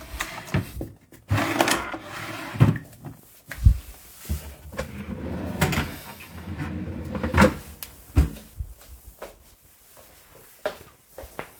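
Nothing stood out as a technical problem on listening to this recording of everyday sounds.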